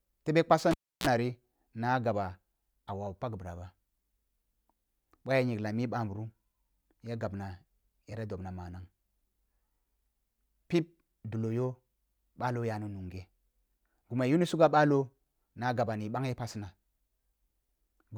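At 0.71 s, just after "tebe kpasi", the cable is pulled and plugged in. A pop cuts the sound. Near silence follows for about 312 ms. A 60 Hz mains buzz lasts 36 ms as the tip makes contact. Another pop restores the sound at 1.07 s.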